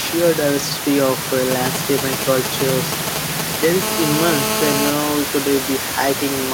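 A speech recording carrying two kinds of mobile-phone interference. From 1.51 to 3.65 s there are GSM signalling bursts: short galloping clusters of ticks and brief 217 Hz buzzes at roughly the speech level, as a nearby 2G handset exchanges signalling bursts whose radio pulses the audio circuitry rectifies. From 3.82 to 4.90 s this becomes a continuous GSM phone buzz, a hard, raspy 217 Hz tone rich in harmonics at about 2 dB below the speech, matching the steady burst rate of that handset in an active call. The room noise, about 8 dB under the speech, belongs to the recording itself.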